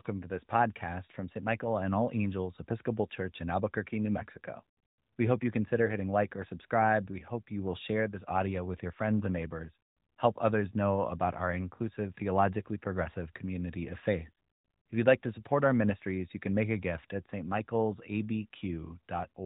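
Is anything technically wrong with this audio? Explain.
No, nothing in this speech is technically wrong. It comes through an AMR narrowband mobile codec, so nothing above 4 kHz is present and there is a light synthetic edge, consistent with a rate around 12.2 kbps.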